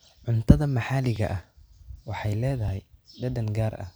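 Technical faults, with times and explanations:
1.16 s and 2.68 s: repeated buffer. A tiny slice of the speech plays twice, consistent with a buffer of about 5 ms, so the hard join sounds like a brief click.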